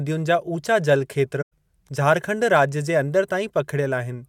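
A short run of AAC frames went missing, and the decoder handled the gap with muting, filling the missing spectrum with silence instead of guessing at it. That AAC frame loss with muting occupies 1.41 to 1.53 s, a hole of about 107 ms in the speech, which fits roughly five consecutive lost frames. Because the decoder's overlapping windows taper into and out of the gap, the speech fades down and back up around a brief silence rather than stopping abruptly.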